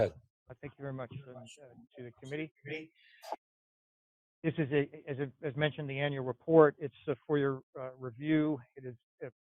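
No technical faults can be heard anywhere in this audio.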